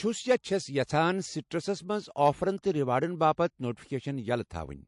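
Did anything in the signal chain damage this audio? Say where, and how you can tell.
Yes. Throughout the speech there is a watery texture, with metallic chirps on sibilants and nothing above 11.3 kHz. This is likely MP3 compression at the codec stage, fitting a bitrate near 48 kbps. Starved of bits, the encoder cuts the treble and drops weak frequency lines that flicker between frames.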